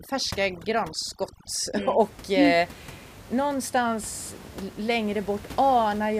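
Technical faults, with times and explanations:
0.0–2.0 s, overdone noise removal: aggressive spectral gating pulls bands near the noise estimate down, leaving twinkling specks where room noise about 19 dB below speech was.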